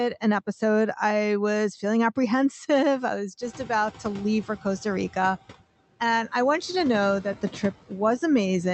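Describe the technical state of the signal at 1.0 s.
Noise suppressor artifacts span the whole clip, including 1.0 s. Per-frame band gains cut steady noise by about 12 dB, so the noise sinks between words, which shows as speckled, patchy gaps between speech on a spectrogram.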